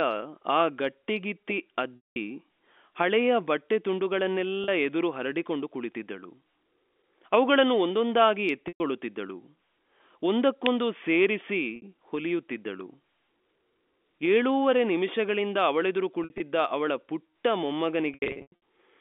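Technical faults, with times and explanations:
1.96–2.16 s, 4.64–4.68 s, 8.68–8.80 s, 11.76–11.82 s, 16.24–16.40 s and 18.14–18.52 s, packet loss with pitch repetition: the receiver fills each gap by repeating the last pitch period. The 40 ms and 60 ms losses sound like a briefly held, buzzy tone. The 120 ms and 200 ms losses fade toward silence before the speech cross-fades back. The losses at 16.24 s and 18.14 s are broken into several shorter runs. Unlike a plain dropout, the gap is filled with a repeated pitch period that fades out rather than a hard hole.
10.66 s, electrical switching spike: a sharp snap lasting under a millisecond sits on top of the speech, likely from a nearby switch or static discharge coupling into the line. It differs from the packet losses because nothing is removed or held; the sound carries on underneath the click. On this narrow telephone-band line, limited to about 250 Hz–3.5 kHz, the snap loses its lowest and highest parts.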